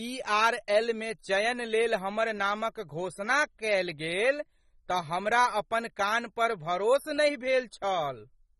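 From start to finish the speech is dull and smeared, with a warbling, fizzy edge on sibilants, the audible damage of AAC compression, likely AAC-LC at a low bitrate, which fits about 24 kbps. A spectrogram shows nothing above 12 kHz.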